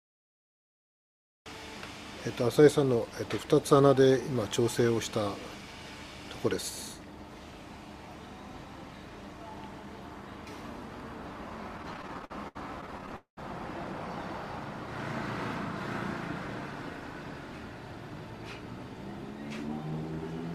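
From 11.77 to 13.12 s the audio drags through repeated stalls (stutter). Eighteen brief holds, the longest 70 ms, stretch existing sound while late packets catch up.

From 13.16 to 13.39 s comes a call audio freeze, likely from packets held in transit. The last sound extends for about 207 ms, fading to silence for the final 120 ms.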